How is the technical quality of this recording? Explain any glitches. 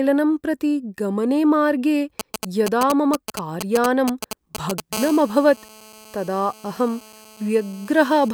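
The speech is marred by two kinds of mobile-phone interference, filling most of the second half.

GSM signalling bursts, 2.20 to 4.80 s, start right after "प्रति गमने मार्गे". A nearby 2G phone transmits short groups of radio bursts, which the audio circuit rectifies. The result is a galloping dit-dit-dit of brief 217 Hz buzzes, nearly as loud as the speech. The stop-start rhythm sets it apart from a continuous buzz.

GSM phone buzz, 4.93 to 8.29 s, comes from a 2G phone in a call, pulsing steadily 217 times a second. The rectified pulses give a hard, raspy 217 Hz buzz rich in harmonics, about 19 dB below the speech. The rasp and the 217 Hz pitch distinguish it from smoother 50 or 60 Hz mains hum.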